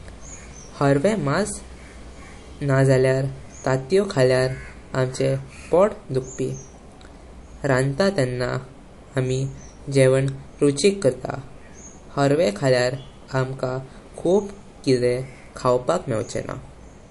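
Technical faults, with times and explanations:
Throughout, MP3 compression: the speech has no content above 11.3 kHz, and the band below that sounds watery and swirly, with s sounds turning metallic and consonant onsets smeared. This is likely a low-bitrate MP3 encode, around 48 kbps, where the encoder drops the treble and zeroes weak frequency lines that flicker on and off between frames. That flickering sets it apart from a simple low-pass filter, which would dull the top end without the swirl.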